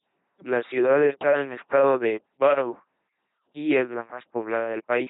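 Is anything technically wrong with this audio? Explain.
Yes, the whole speech clip runs through an LPC-10 vocoder, which fits the old 2.4 kbit/s military codec. Each moment gets either a buzz pulse train or noise through a small vocal-tract filter, so it's a heavy robotic buzz with hissy slips, and nothing above 3.9 kHz.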